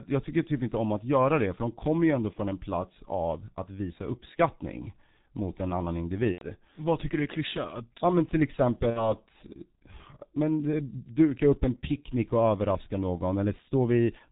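Throughout, the speech shows heavy G.723.1 codec damage, consistent with a 6.3 kbit/s stream. Nothing is passed above 4 kHz and the slowly updated voice model leaves the voice muffled and hoarse, with blurred consonants. At 2.33–2.39 s, after "de kommer ju ändå" and before "en plats av att", VoIP packet loss concealed by the speech codec briefly stretches the sound into a buzzy tone or coloured noise that fades, which fits a single lost 30 ms frame. It recurs at 6.32–6.47 s after "uppskattning mot en annan", suggesting about 90 ms lost, and at 8.90–9.14 s after "men till", suggesting about 60 ms. Each time the decoder stretches its last pitch and filter at falling gain, and the voice stays weak until the model recovers.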